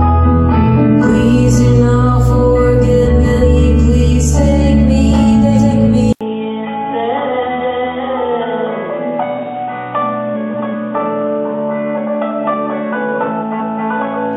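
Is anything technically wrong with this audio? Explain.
Yes, two kinds of fault are audible.

Frames out of order occur at 3.05–3.46 s, 5.41–5.72 s, 7.46–7.87 s, 10.34–10.72 s and 13.41–13.80 s. In each, two adjacent blocks of decoded audio were played in swapped order, so the later half comes first. Most blocks last about 186 ms; the one at 5.41 s is about 139 ms. Each sounds like a brief garbled flutter. The overall timing is unchanged.

From 6.13 s to the end, the input switched to a poorer device, likely a different microphone or a headset's call profile. An 80 ms silence marks the switch. After it, nothing is present above 3.8 kHz, so the sound turns dull and boxy. The level drops by roughly 10 dB, and a new noise floor appears about 30 dB below the signal.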